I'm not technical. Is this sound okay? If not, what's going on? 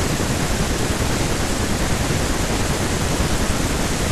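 Yes, this recording sounds fine, with nothing wrong.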